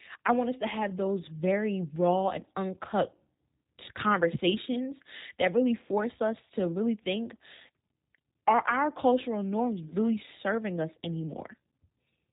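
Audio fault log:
Throughout: G.729 codec. Nothing gets through above about 3.8 kHz, and the speech has that plainly rough, slightly synthetic edge you get when it's rebuilt from a vocal tract filter, pitch predictor and a few pulses per frame, which fits an 8 kbit/s G.729A stream.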